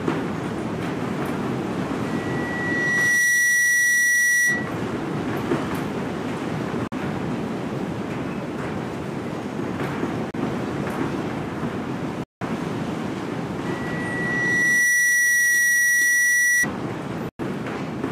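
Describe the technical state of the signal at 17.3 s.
At 17.3 s the sound cuts out abruptly from 17.29 to 17.39 s, about 100 ms of silence, and then comes back as though it had kept running underneath, with that stretch simply missing. That's a Bluetooth dropout, most likely several audio packets failing to reach the headphones in time and being thrown away. The output just sits silent until fresh packets arrive, so you get a clean hole rather than a stall or repeat.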